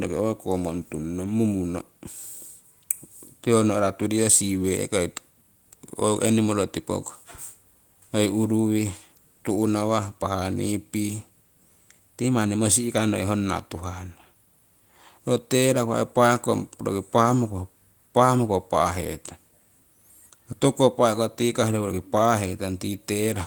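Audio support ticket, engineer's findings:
No fault found on listening to the speech recording. Nothing heard that points to any component in the chain.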